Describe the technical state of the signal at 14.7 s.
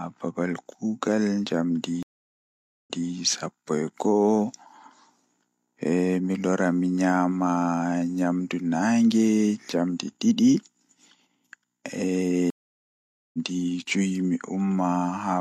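At 14.7 s the signal is intact, with no audible dropout, distortion, noise or other fault.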